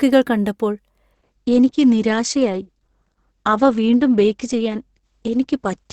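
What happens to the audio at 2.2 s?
An adaptive stream at a lower bitrate is playing at 2.2 s, a stretch that runs from 1.13 s to the end of the clip. The player switched to a leaner version when the connection slowed, which fits a sudden, gapless drop from about 64 kbit/s to 12 kbit/s Opus. Nothing remains above 8.8 kHz, so the speech sounds duller and more artefact-laden.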